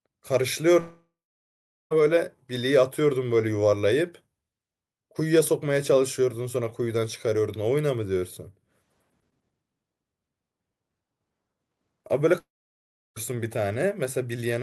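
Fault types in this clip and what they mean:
Long network dropout: the speech cuts out twice, from 0.79 to 1.93 s and from 12.39 to 13.18 s. Each gap opens with a short, fading buzz that stretches the last sound. Then comes flat silence, 0.78 s in the first gap and 0.70 s in the second. Speech returns with a piece gone, about 1.1 s and 0.8 s. The likely cause is audio lost in transit, with the receiver filling the hole.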